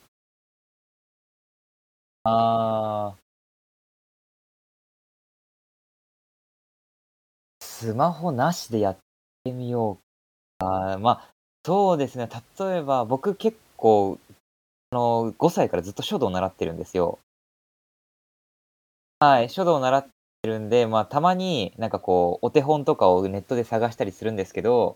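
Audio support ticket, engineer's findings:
Clipped start after a pause at 2.18, 7.54, 9.39, 10.53, 11.58, 14.86, 19.15 and 20.37 s. Speech onsets swallowed, 65 to 76 ms lost each time, even after pauses as short as 0.33 s. The output device sleeps in silence and misses each onset while waking and relocking. Muted pauses are normal.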